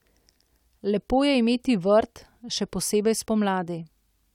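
It's a short speech clip with clock drift buffer slips: a click or tick recurs every 1.05 s, roughly four of them, from about 0.49 s to 3.65 s. That steady spacing is the giveaway. The likely cause is two devices running on separate clocks that disagree by something on the order of 150 ppm, so the buffer between them creeps until a handful of samples gets dropped or repeated, leaving a tiny discontinuity in the waveform each time.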